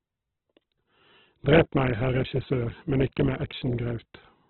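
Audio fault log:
throughout Opus compression: the speech has nothing above 4.2 kHz and sounds heavily rough and grainy, with band energy kept but filled by noise, not MP3-like swirling holes. This likely comes from Opus music mode starved of bits, which fits about 8 kbps.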